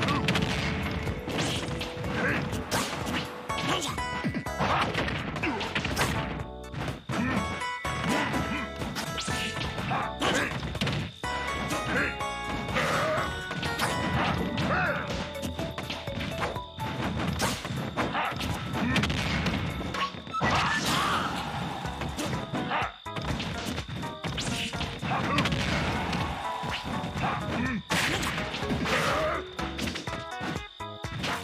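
Nothing stood out as a technical fault on listening through this audio.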